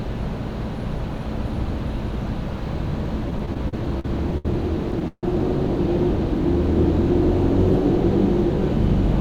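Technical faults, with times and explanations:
3.30–4.46 s, repeated stalls (stutter): the sound catches and drags eight times in just over a second, each hitch a brief smear of the preceding sound, the longest about 69 ms, together about 211 ms, close to a fifth of that stretch. Packets were reaching the receiver late or slower than playback, so its jitter buffer kept running dry and it stretched the last sound to bridge each wait. Nothing is dropped; the sound is held back and delivered haltingly.
5.08–5.24 s, call audio freeze: the sound hangs for about 151 ms, a continuation of what came just before that fades away and ends in roughly 50 ms of silence, then resumes exactly where it stopped. The likely cause is packets held up in transit, leaving the jitter buffer empty, so the receiver extended the last sound and let it die out until data arrived again. Nothing is lost, but a gap has been inserted, pushing everything after it about 151 ms later.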